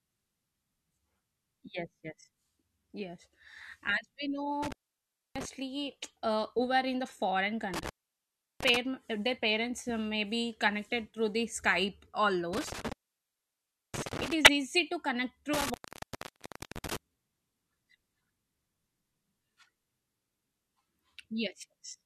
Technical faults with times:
4.63-5.45 intermittent contact
7.74-8.77 intermittent contact
12.53-14.33 intermittent contact
14.45-14.48 corrupt frame decoded
15.53-16.96 intermittent contact

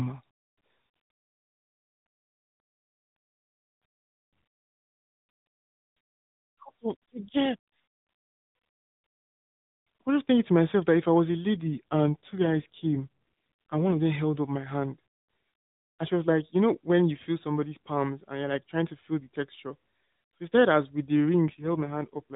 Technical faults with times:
11.55-13.98 AMR rate drop
21.47-22.36 AMR rate drop

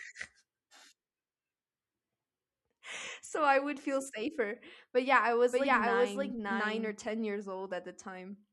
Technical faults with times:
5.51-7.07 doubled audio track

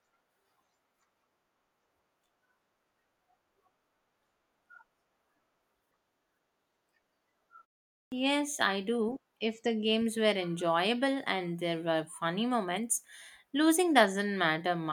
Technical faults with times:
8.03-8.12 clipped start after a pause

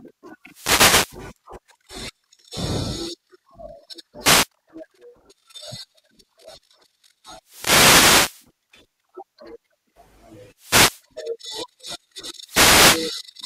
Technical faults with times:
0.43-1.25 wireless microphone noise hit
4.20-4.48 wireless microphone noise hit
7.42-8.50 wireless microphone noise hit
10.56-11.04 wireless microphone noise hit
12.41-13.10 wireless microphone noise hit

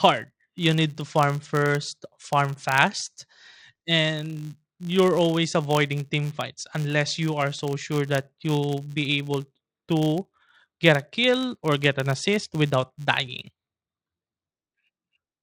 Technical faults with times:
0.00-15.43 filter restarted on every block

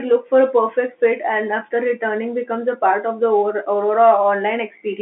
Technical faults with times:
none

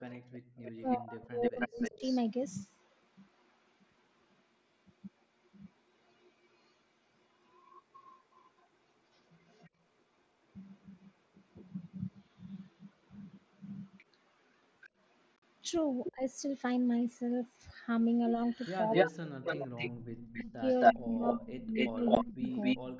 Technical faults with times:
0.09-2.18 echo leak
0.19-0.53 background gated by the echo canceller
0.81-2.03 speech suppressed in double talk
6.22-9.70 echo leak
13.98-16.12 echo leak
15.36-15.43 unconcealed Bluetooth headset packet loss
16.15-16.23 speech suppressed in double talk
18.35-22.50 speech suppressed in double talk
18.44-22.99 echo leak
22.15 unconcealed Bluetooth headset packet loss

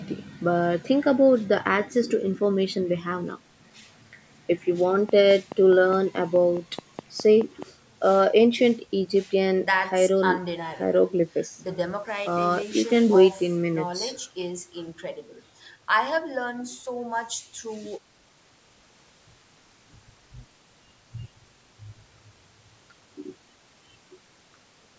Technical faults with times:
5.09-7.63 train of clicks

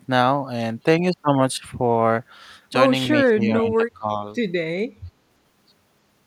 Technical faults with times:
3.25-4.11 speech suppressed in double talk

